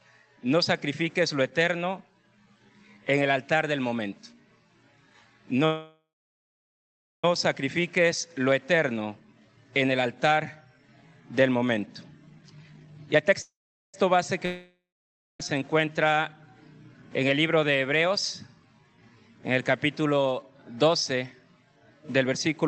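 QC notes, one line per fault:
5.65–7.25 s, call audio freeze: the sound stalls, a fading buzz gives way to about 1.2 s of near silence, then resumes exactly where it stopped with nothing lost. Likely packets held up in transit emptied the jitter buffer, inserting a 1.58 s gap.
9.25–10.02 s and 12.36–13.34 s, jitter buffer speed-up: the audio hurries at unchanged pitch, gently at 110% speed in the first run, sharply at 156% in the second, where roughly half a second is trimmed. Backed-up audio was shortened by cutting repeated pitch-period pieces.
13.42–13.95 s, call audio freeze: a brief fading buzz, then about 0.43 s of silence, after which the audio picks up without any loss. Likely another late-packet stall draining the jitter buffer, adding about 0.52 s of delay.
14.46–15.40 s, long network dropout: a decaying buzz fades into about 0.57 s of silence, and when audio returns roughly 0.94 s of it is simply gone. 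Likely no packets arrived for that stretch, so the missing portion was never played.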